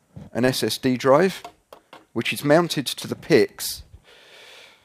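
Short concealed packet loss occurs at 0.45 to 0.49 s and again at 2.99 to 3.03 s. About 20 ms of audio never arrived in time, so the receiver extended the preceding sound and crossfaded back. Each heals as a brief smear, with stretched partials or noise on a spectrogram and no real waveform detail.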